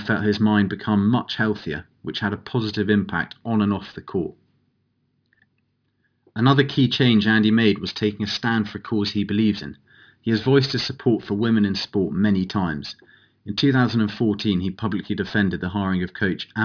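Speech with aliasing throughout: sibilants sound gritty and metallic, and the spectrum stops hard at 5.5 kHz. High-frequency content was folded back below that edge rather than filtered out, which fits an unfiltered drop to an 11 kHz rate. The folded energy sits roughly 20 dB under the signal.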